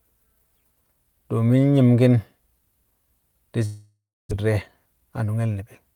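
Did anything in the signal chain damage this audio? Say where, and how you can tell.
Yes. From 3.65 to 4.33 s there is a long network dropout, most likely from lost packets. The last sound is stretched into a fading buzz, then about 0.3 s of silence, and the audio resumes with roughly 0.6 s of content gone.

From 4.91 to 5.29 s the jitter buffer speed-up is audible. The receiver trims pitch-period slices to drain excess buffered audio, so the sound runs about 108% fast at unchanged pitch, shedding around 40 ms and sounding hurried.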